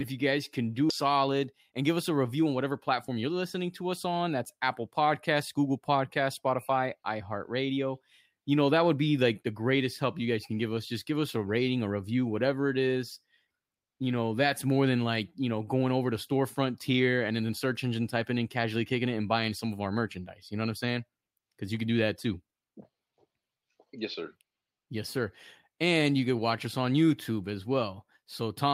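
This speech clip has two faults. At 0.9 s, just after "if you guys can", there is a skip ahead: playback jumps forward with no gap, and about a second and a half of audio is missing. The two sides are joined almost directly. From 1.05 to 3.30 s, just before "to us on", a jitter buffer speed-up follows. The receiver trimmed many short pitch-period pieces to shrink its backlog, so the speech plays about 10% fast at unchanged pitch. Roughly a fifth of a second is removed, and the delivery sounds hurried.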